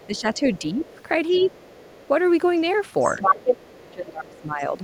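A speech clip with a second, far-end voice leaking through at 0.0–0.2 s, 0.83–2.08 s, 3.01–3.94 s and 4.33–4.64 s. It is very faint at first, then as loud as the talker near 3–4 s. This is likely residual loudspeaker echo that the canceller failed to remove. It is an added voice, not a change to the talker's own sound. Speech suppressed in double talk appears at 0.07–0.86 s, 3.16–3.22 s and 3.81–4.74 s, where the talker's own voice dips by up to about 20 dB or cuts out in pieces. This likely comes from the canceller ducking everything while both sides overlap.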